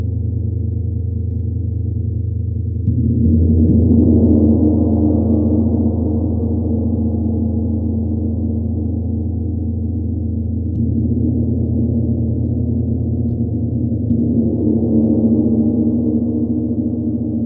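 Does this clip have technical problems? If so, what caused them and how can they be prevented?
Yes: imaging from linear upsampling throughout, where a 16 kHz recording was raised to 48 kHz by straight-line interpolation, dulling its top and leaving mirrored images around 8–16 kHz, roughly 65 dB down. Prevent this by resampling with a proper windowed-sinc or polyphase filter.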